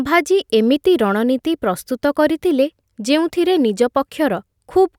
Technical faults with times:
none

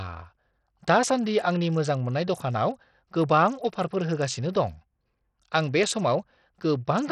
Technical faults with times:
0.00-7.12 Bluetooth SBC compression

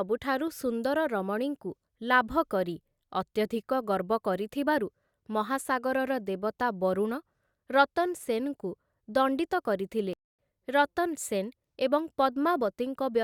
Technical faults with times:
10.13-10.39 playback stall

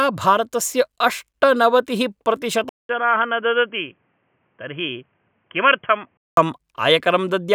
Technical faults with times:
2.69-6.37 input switched to a poorer device

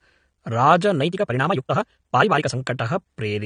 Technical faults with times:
0.00-3.46 AAC compression
0.99-2.57 time-stretched section

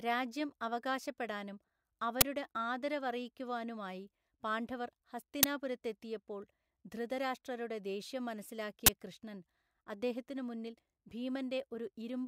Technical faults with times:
2.21 uninitialised buffer
5.43 uninitialised buffer
8.86-8.89 uninitialised buffer

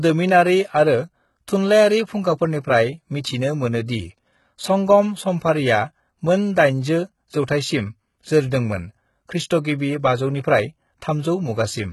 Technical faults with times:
0.00-11.92 HE-AAC compression

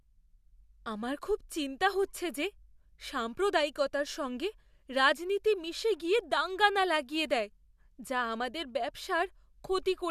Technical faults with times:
none

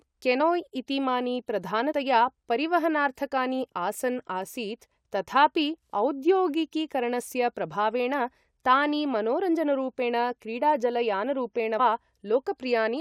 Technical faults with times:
0.39 compressed frames skipped
1.91-1.93 compressed frames skipped
11.78 compressed frames skipped

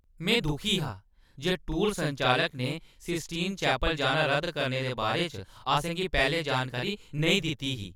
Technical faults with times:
0.00-7.96 channel delay (doubling)

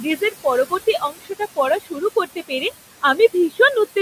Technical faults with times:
0.00-4.02 noise suppressor artifacts
0.03-0.45 speech cut by the noise suppressor
0.99-2.63 speech cut by the noise suppressor

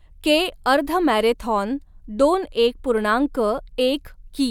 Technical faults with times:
none

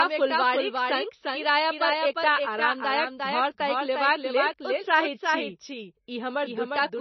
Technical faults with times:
0.00-7.01 doubled audio track
0.00-7.01 MP3 compression

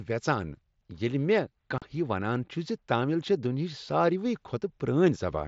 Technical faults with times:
1.78-1.82 unconcealed Bluetooth headset packet loss

